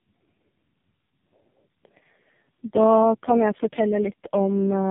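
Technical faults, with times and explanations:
Throughout, tandem speech coding: the speech sounds like it passed through three low-rate speech coders in a row, consistent with a GSM full-rate stage followed by two AMR-NB stages near 6 to 7 kbit/s, with plain G.711 hops between them. Each coder re-models the previous one's already damaged output, so the errors stack. The result is rough, warbly, muffled speech with nothing above 3.7 kHz.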